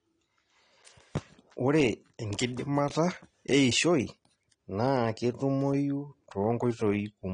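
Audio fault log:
Throughout: AAC compression. Nothing is heard above 9.8 kHz, so the speech sounds dull and muffled. Sibilants turn fizzy and vowels warble. The damage is plainly audible. The likely cause is AAC-LC coding with too few bits, which fits a rate near 32 kbps.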